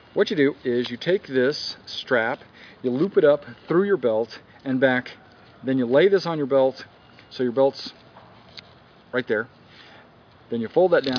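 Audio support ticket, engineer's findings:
No faults found on listening. No audible defects to attribute to any component.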